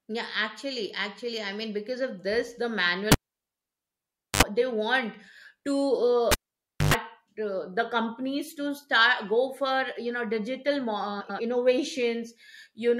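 The cable gets pulled and plugged in twice. At 3.12 s there's a pop, then about 1.26 s of near silence, a short 66 ms burst of 50 Hz mains buzz as the tip touches, and another pop at 4.43 s. At 6.32 s the same happens with a shorter 0.57 s gap, a longer 113 ms buzz, and the return at 6.94 s.

Then from 11.2 to 11.4 s there's a case of frames out of order. Two neighbouring blocks of about 93 ms each were swapped, which fits runs of roughly four frames, so the stretch plays back to front in halves. You get a garbled flutter, but no time is lost.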